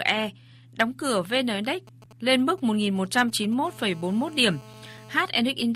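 Speech carries two kinds of mobile-phone interference. From 1.87 to 3.54 s, GSM signalling bursts break in as galloping ticks and short 217 Hz buzzes, well below the speech. A nearby 2G phone is handshaking, and the audio circuit rectifies its radio pulses. From 3.65 to 5.22 s, a steady GSM phone buzz follows. It is a hard, raspy 217 Hz tone with many harmonics, about 24 dB below the speech, from a nearby 2G phone holding a call.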